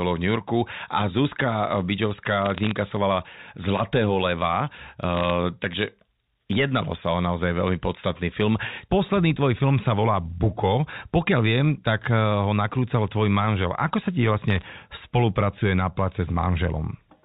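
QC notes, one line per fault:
2.42–2.71 s, 5.15–5.30 s and 14.50–14.66 s, bit errors on a digital phone line: three short bursts of sharp ticks and crackle laid over the speech, at a rate of a few tenths of a percent of bits. Each flipped bit corrupts one logarithmically coded sample, and hits on the sign or upper bits jump it far off, giving an isolated click. Unlike packet loss, nothing drops out or repeats: the speech underneath continues intact.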